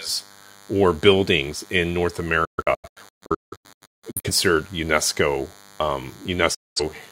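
A thin, steady buzz at 100 Hz with many harmonics runs under the speech for the whole clip, roughly 25 dB below it. This is DECT cordless phone buzz: a nearby handset or base pulses its radio every 10 ms, and the audio circuitry rectifies those bursts.

From 2.45 s to 4.30 s the speech breaks into a string of short holes, the longest about 0.17 s, together swallowing about 1.1 s. A second dropout, losing about 0.21 s, follows at 6.54 s to 6.82 s. Each gap fades out over 8 ms. This is digital broadcast dropout: the receiver lost the signal or rejected corrupted frames and muted until clean data returned, so that audio is gone.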